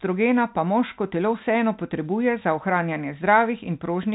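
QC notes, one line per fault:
No faults to log in the speech. The G.711 telephone coding behaves as that format should, with the band stopping at about 3.8 kHz and any quantisation noise faint at most.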